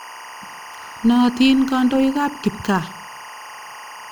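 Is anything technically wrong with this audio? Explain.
Yes. Timecode bleed runs through the whole clip. Linear timecode from a neighbouring track or cable has leaked into the speech path. The code is a square wave that flips between two pitches, here around 1 and 2 kHz. Its sync word repeats every frame, and the rhythm fits code running at 23.976 frames per second. It sits roughly 20 dB below the speech. It is heard as a steady, chirping warble behind the talking.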